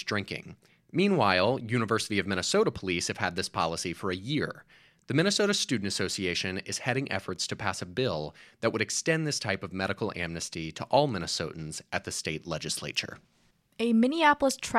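No technical faults are audible.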